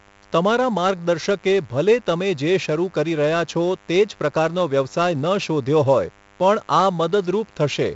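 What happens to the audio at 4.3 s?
At 4.3 s the speech carries two faults, both running the full length of the clip rather than starting at that moment.

The first is DECT cordless phone buzz. A nearby DECT handset or base transmits a brief radio burst every 10 ms, and the audio circuitry rectifies those bursts into a signal. The result is a steady, thin buzz at 100 Hz with a dense stack of harmonics, sitting roughly 30 dB below the speech.

The second is heavy damage from 4-bit ADPCM compression. Each sample is coded as a coarse 4-bit step away from a predicted value, with the step size adapting as the signal changes. The quantisation error becomes broadband noise that rises and falls with the speech level, so louder syllables come with a gritty hiss, and abrupt onsets distort where the step size lags behind. Nothing is present above 7.7 kHz, which fits a 16 kHz sample rate at about 64 kbps and gives the speech a dulled top end.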